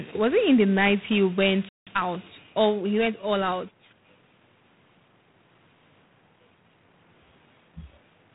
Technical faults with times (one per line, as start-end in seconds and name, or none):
0.00-8.35 G.726 ADPCM
1.69-1.87 playback stall
1.87-2.03 time-compressed catch-up